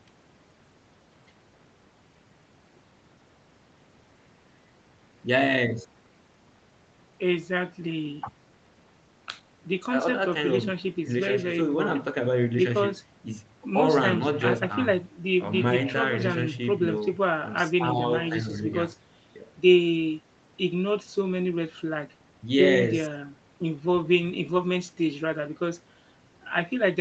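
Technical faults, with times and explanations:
No faults: the speech shows the call microphone's usual high-pass and an Opus call path band-limited to about 8 kHz, both working as expected.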